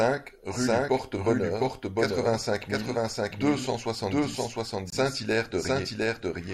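A speech clip that carries a second copy of itself throughout, a doubled audio track. The copy sits roughly 0.7 s behind the original at about the same level, full-band and with no decay or room colour, so each phrase is immediately restated over the next. This is likely a second capture through a slower path. A spectrogram shows every speech pattern repeated intact, shifted right by the same gap across all frequencies, and the waveform's syllable envelopes appear in offset pairs. From 4.90 s to 4.94 s there is a Bluetooth dropout: the sound cuts out for about 23 ms, then resumes further along, as if it had kept playing through the hole. That length fits a single lost audio frame on the wireless link. On the waveform it is a short flat gap of silence, and the spectrogram shows a narrow blank vertical strip spanning all frequencies.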